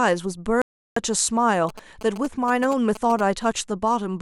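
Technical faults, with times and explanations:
0.62–0.96 s: audio dropout to silence. The speech stops abruptly and about 350 ms of silence follows, with no room tone underneath, before the sound resumes mid-flow. That flat gap means the recorder kept writing silence while no input reached it, likely because a device or link briefly disconnected or a mute was engaged. Whatever was spoken in that stretch is missing.
1.69–3.21 s: GSM signalling bursts. A galloping dit-dit-dit of short buzzes sits under the speech at about 15 dB below it, the buzz carrying a 216.7 Hz repetition. This is a nearby 2G phone exchanging signalling with its network, sending its radio energy in short clusters rather than continuously. The audio circuitry rectifies those bursts, turning the radio frame rhythm into audible short buzzes for about 1.5 s.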